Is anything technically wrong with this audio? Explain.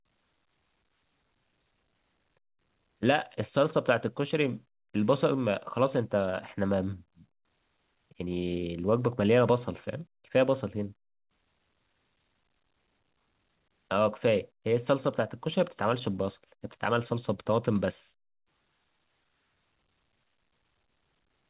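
No, nothing is technically wrong with this speech recording. It has the narrowband sound of a call path, with nothing above 4 kHz, which fits a G.711 A-law codec at 64 kbps.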